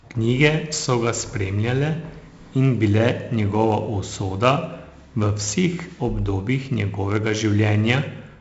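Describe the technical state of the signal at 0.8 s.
At 0.8 s the speech carries 4-bit ADPCM compression, which runs through the whole clip. Each sample is coded as a small step from a predicted value, and the step size adapts as it goes. The damage here is heavy. Loud syllables carry a gritty hiss that rises and falls with them. Sharp onsets smear and distort. Nothing sounds above 7.7 kHz, so the top is dull. That fits a 16 kHz stream at 64 kbps.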